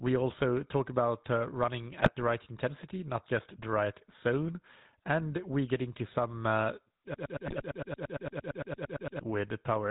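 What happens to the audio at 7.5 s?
A broken-record loop runs from 7.14 s to 9.21 s, starting just after "into some a uh". The stream most likely stalled and kept resending the last fragment it held: a 114 ms slice of the GSM-coded speech repeats exactly, back to back, about 18 times. It makes a rapid stuttering drone, and whatever should have followed in those two seconds is lost.

GSM bit errors land inside that loop from 7.47 s to 7.62 s. Corrupted bits, at a rate of about 2.6%, reached the speech decoder and scrambled its filter, pitch and gain values across a stretch that fits roughly eight 20 ms frames. The spectrum bends and the level jumps, so the repeating fragment briefly breaks into squawks, pops and gargling.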